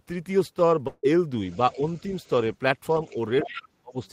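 A short speech recording with three kinds of fault. From 0.87 to 1.05 s there is a long network dropout, likely from audio that never arrived: about 0.16 s is missing. Nearly all of the gap is bridged by the receiver stretching the last sound into a buzzy tail that fades, leaving only a sliver of silence before speech resumes with the lost part skipped. On a spectrogram this appears as smeared, repetitive harmonics that dim toward a brief blank column. Next, the other side's voice leaking through, likely echo the canceller failed to remove, is faintly audible from 1.50 to 2.28 s and from 2.91 to 3.16 s, roughly 30 dB below the talker. It returns more clearly from 3.44 to 3.61 s at about 15 dB down. On the spectrogram these stretches show faint second-voice harmonics interleaved with the main speech, strongest in that last stretch. Finally, there is speech suppressed in double talk, likely the canceller turning everything down while both sides overlapped. 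Brief dips of about 5 dB occur at 1.76 to 1.82 s and 3.13 to 3.17 s. A much deeper cut of about 35 dB spans 3.43 to 4.00 s, gouging out roughly 0.4 s of the talker. On a waveform these look like sudden envelope pinches, and the last is a near-collapse of amplitude.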